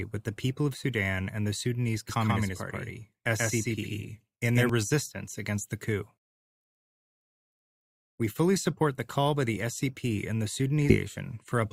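A second capture path or an out-of-step edit has likely mixed the same speech in twice. From 2.09 to 4.69 s, just before "resistance against the coup", a doubled audio track runs about 150 ms behind at roughly equal level, with no decay or room colour, and cuts in and out abruptly. Later, a segment of the stream likely failed to load and the player moved on to the next one. This stream segment skipped at 10.89 to 10.95 s, right after "and the": the speech jumps ahead mid-flow with a small blip, and part of the programme is lost.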